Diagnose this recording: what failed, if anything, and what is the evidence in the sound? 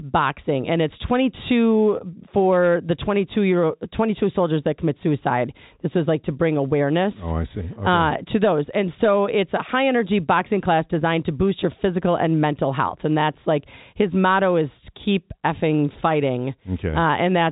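Nothing has failed here; the speech just carries the usual G.711 telephone coding sound, with nothing above about 3.8 kHz, and there's no event anywhere in it that points to a broken stage.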